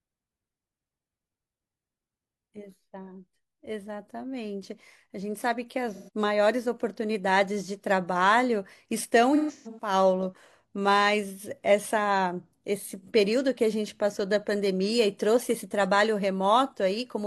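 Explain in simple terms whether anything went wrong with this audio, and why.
Three brief smeared, hissy patches break up the speech, at 5.90–6.10 s, a scattered cluster at 9.35–9.93 s, and 13.02–13.09 s. That is AAC frame loss with concealment: small chunks of audio went missing, and the player filled each gap by guessing from the sound just before.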